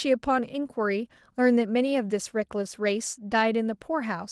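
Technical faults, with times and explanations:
No technical faults are audible in this speech, which carries the light, full-band character of Opus voice compression working as intended.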